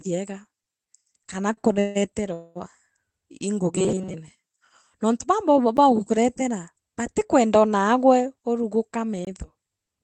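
At 1.32 s the playback side likely failed to fill its output buffer in time, so a block of digital silence about 3.8 ms long replaced the audio. The signal cuts out and back without any fade, so the two hard edges merge into a single sharp tick in the speech.

From 1.53 to 1.97 s, packets kept arriving late and the jitter buffer ran dry four times, causing repeated stalls (a stutter). Each time, the receiver stretched the last sound to bridge the wait. Those fills add up to 239 ms, the longest being 158 ms, and cover over half of that span. Nothing is lost, but the speech drags and catches in quick, uneven hitches.

Between 2.33 and 2.57 s there is a call audio freeze, likely from packets held up in transit. The final sound is drawn out into a fading buzz for 221 ms and never quite reaches silence. When the audio resumes, it carries on from the exact point where it stopped. The result is an inserted pause and 221 ms of extra delay, with no speech missing.

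From 3.76 to 4.15 s, fresh audio is arriving too rarely and the software is re-playing a very short stretch to cover the gaps. This is likely the cause of the robotic sound from repeated short buffers heard here. Across most of this passage, the loop imposes a fixed 188 Hz buzz, matching a repeat of about 5.3 ms, and it turns the speech into a stiff, metallic drone.

At 5.77 s, just before "kuretera batikwenda naagwe", another block of digital silence appears, about 10.7 ms long. It fits one missed 512-sample buffer at 48 kHz and produces a short tick.

From 8.36 s to 10.0 s, following "kuretera batikwenda naagwe", the jitter buffer is holding more audio than its target. A jitter buffer speed-up removes about 150 ms through many small cuts of whole pitch periods. The speech runs at 108% of normal speed with its pitch unchanged, giving a hurried, clipped feel.

Inside that stretch, at 9.25 to 9.27 s, a third block of digital silence of about 21 ms fits a missed 1024-sample buffer. 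It is long enough to be heard as a brief hole. The whole clip also carries the narrowed top end of the Opus call path, with nothing above 8 kHz.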